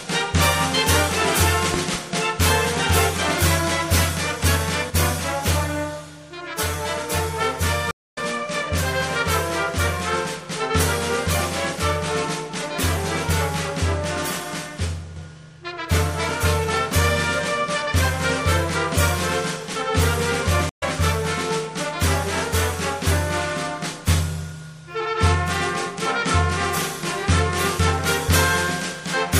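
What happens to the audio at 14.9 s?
From 14.79 to 15.16 s, one stereo channel likely drops out; in the mono sum, shared content falls abruptly by about 6 dB and anything in that channel alone vanishes. Throughout, including this moment, likely MP3 compression leaves plainly audible watery, swirly artefacts, with smeared attacks, which fits a 64 kbps encode.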